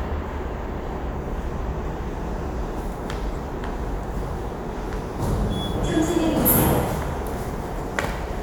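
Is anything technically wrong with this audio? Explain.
No, nothing technically wrong stood out on listening to this recording.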